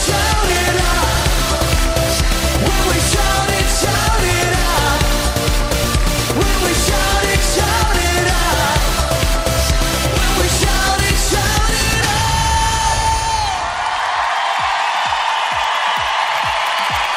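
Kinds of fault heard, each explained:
No technical fault can be heard anywhere in this audio. Nothing in it calls for an explanation under any fault heading.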